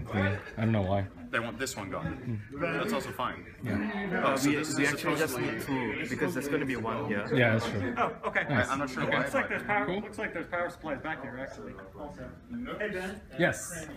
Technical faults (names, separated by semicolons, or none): none